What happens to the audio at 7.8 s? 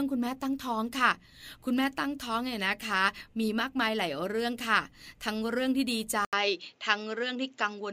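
At 7.8 s the speech sounds duller and boxy, with nothing above 7.6 kHz and a faint new background noise well below the voice, while loudness stays about the same. This began at 6.25 s, after a silent gap of 80 ms, and lasts to the end of the clip. The likely cause is an input switched to a poorer device, a different microphone or headset path with its own narrower band and its own noise.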